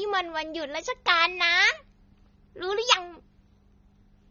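Speech throughout sounds dull and smeared, with a fizzy, warbling edge on sibilants, most likely from AAC compression, which fits AAC-LC at a low bitrate near 24 kbps.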